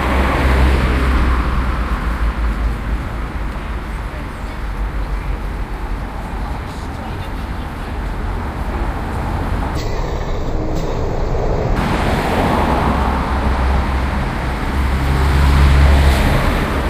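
From 9.76 to 11.76 s the sound drops into a stereo read as mono fault. The left and right samples, which alternate in the stream, are taken one after another as a single channel, so each moment is stretched over twice as many samples. The passage plays at half speed and a full octave low, 12 semitones down, with a faint mirrored copy in the upper spectrum. A sample-rate mismatch can also slow and lower the sound, but it lacks that mirror image.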